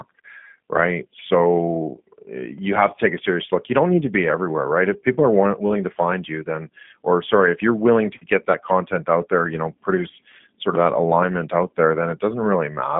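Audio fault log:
Throughout, G.729 codec: the speech carries the rough, faintly synthetic edge of a low-rate CELP coder. Each 10 ms frame is rebuilt from a vocal tract filter, a pitch predictor and a few pulses rather than from the actual waveform. The sound sits in a telephone band of about 150 Hz to 3.5 kHz, with nothing above 3.7 kHz, and the plainly audible coding damage fits an 8 kbit/s G.729A stream.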